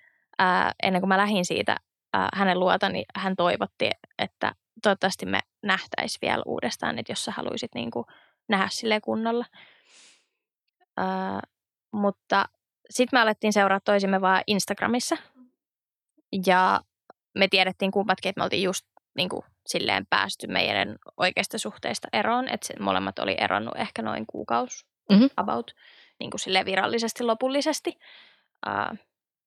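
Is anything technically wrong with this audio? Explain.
No, nothing technically wrong can be heard in this speech recording. There is no fault to report anywhere in it.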